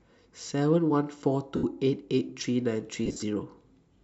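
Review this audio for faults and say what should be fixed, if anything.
Lost LE Audio frames break the speech twice: from 1.56 to 1.64 s, a single 75 ms gap, and from 3.06 to 3.23 s, where about 128 ms goes missing in pieces spread over 165 ms, the longest run around 50 ms. The gap lengths fit 7.5 ms LC3 frames. In each gap the decoder replays the last spectrum with scrambled signs, so the voiced sound turns into a hissy smear that fades rather than cutting to silence or stuttering like a repeated waveform. The light lossy compression underneath adds at most a faint watery texture on noise and attacks. Strengthening the Bluetooth link by shortening the distance, reducing 2.4 GHz interference, or allowing retransmissions would prevent the lost frames.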